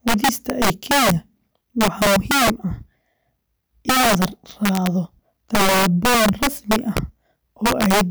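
This is a speech recording with integer overflow running through the whole clip. The signal is driven about 7 dB past the top of the integer range. Instead of being limited there, each loud peak wraps around to the opposite sign. The waveform jumps across the full range in an instant. Roughly one sample in fourteen goes over. So the louder moments of speech break into violent cracks, far harsher than ordinary clipping.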